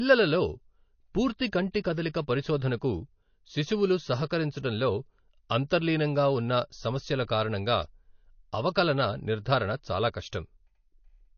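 Throughout, the speech sounds watery, with plainly audible swirling; this is likely MP3 compression at a low bitrate, around 32 kbps. At 10.29 to 10.33 s, just after "అవకలన నిర్ధారణ చాలా", a 38 ms hiss smears in ahead of an attack: pre-echo, where block-spread quantisation noise fills the quiet moment before the onset.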